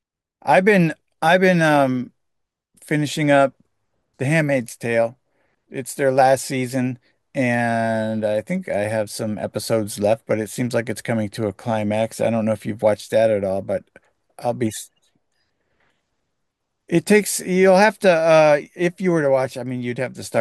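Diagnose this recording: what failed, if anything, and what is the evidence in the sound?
Nothing failed; no faults heard.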